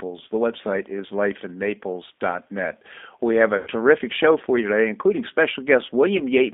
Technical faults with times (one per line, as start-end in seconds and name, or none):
0.00-6.54 G.729 codec
3.57-3.69 VoIP packet loss concealed by the speech codec
6.17-6.22 VoIP packet loss concealed by the speech codec